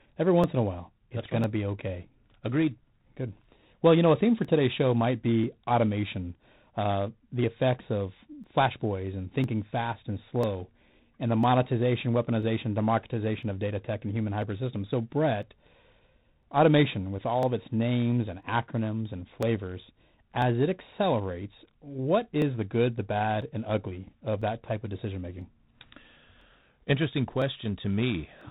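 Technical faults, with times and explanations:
Throughout, G.726 ADPCM: the codec sends only a few bits per sample describing how far the audio strays from its own adaptive prediction, and at this coarseness, which fits the 24 kbit/s mode, those errors become a harsh, rasping hiss riding on the speech and rising and falling with its level. The codec's telephone band also removes everything above 3.9 kHz, so the speech sounds narrow and dull.
0.44 to 28.41 s, periodic USB or driver dropouts: at a steady interval of 1.0 s, something stalls the USB transfer or the audio driver, and about a millisecond of audio is skipped outright rather than replaced with silence. The waveform jumps across each gap, producing a small click, about thirty in all, evenly spaced through the clip. They stand out during speech and are not heard in pauses, where there is little signal for the jump to disturb.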